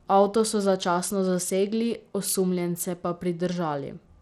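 From start to finish the speech sounds gritty and dulled: the treble flickers in and out, with a rough, aliased edge on the sound. This is likely Bluetooth SBC compression at a low bit pool, around 96 kbps, starving the upper sub-bands of bits and coarsely quantising the rest.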